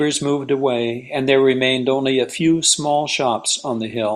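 No technical faults are audible anywhere in the recording.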